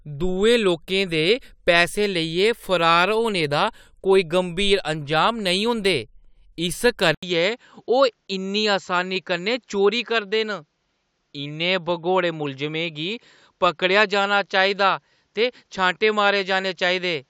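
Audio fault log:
7.15–17.29 s input switched to a poorer device: 80 ms gap, then nothing above 7.6 kHz, roughly 5 dB quieter, faint new noise; likely a microphone change.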